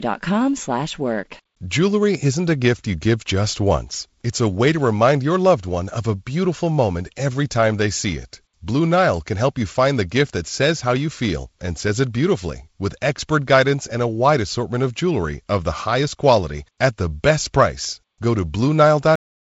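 At 19.16 s the speech has a cut-off end. The final stretch of audio was never written out, so the sound stops mid-utterance and falls straight to digital silence with no decay. The waveform ends abruptly in a flat line. The spectrogram, band-limited by G.722 coding to about 7.7 kHz, shows a sheer vertical edge.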